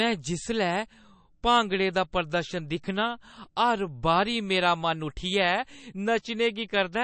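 From start to finish the speech sounds watery and swirly, with a thin metallic chirp on s sounds and softened, smeared consonant onsets. Nothing is heard above about 8.3 kHz, so the top end is dull. This is likely MP3 compression: short of bits, the encoder cuts the treble at a fixed frequency and drops weak frequency lines that flicker on and off between frames. The damage is plainly audible, which fits a low bitrate of around 35 kbps.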